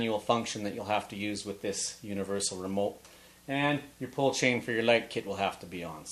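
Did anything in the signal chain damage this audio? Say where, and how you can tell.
No, nothing in the chain audibly damaged this audio.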